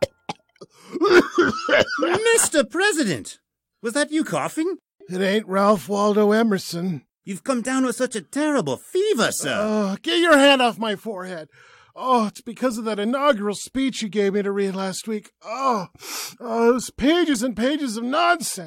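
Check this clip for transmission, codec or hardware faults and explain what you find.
No faults found anywhere in the speech.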